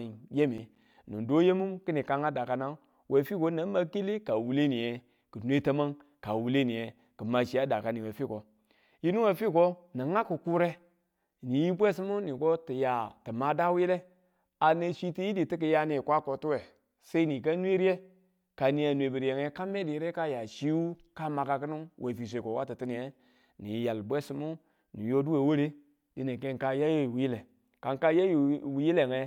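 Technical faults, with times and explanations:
0.58–0.94 s: processor overload crackle. For about a third of a second the speech is broken by a gritty burst of clicks. The processing could not complete its audio buffers in time, and around ten deadlines were missed. Each miss drops a short slice of signal and leaves a brief silent gap with hard edges. The length of each gap fits buffers of roughly 5 ms. The crackle stops once the load clears.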